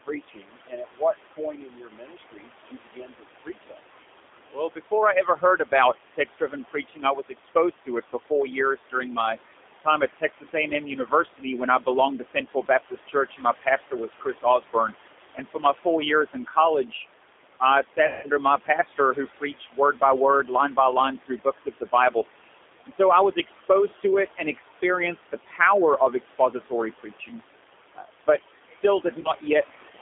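A speech recording carries noise suppressor artifacts from start to finish. The suppressor pulls steady background down by about 18 dB, so room noise, sitting about 13 dB under the voice, dips between phrases and swells under them. The G.729 codec, here G.729A at 8 kbit/s, is also plainly audible throughout. Sound only passes between 300 Hz and 3.6 kHz. Speech is rebuilt from a coarse filter and pulse model, so it sounds rough, thin and somewhat synthetic. Speech cut by the noise suppressor recurs in four spans: 0.04 to 3.97 s, 4.52 to 17.05 s, 17.6 to 22.26 s and 22.85 to 29.43 s. The suppressor mistakes weak speech for noise and drops it by up to about 19 dB. Soft endings and quiet stretches sound swallowed, roughly ten seconds in all. VoIP packet loss concealed by the speech codec occurs twice. From 18.07 to 18.28 s, 160 ms of audio is missing. The decoder stretches the last sound into a fading buzzy tone or coloured noise, and the voice stays weak briefly afterward. 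At 29.21 to 29.32 s, a shorter 40 ms gap is concealed the same way.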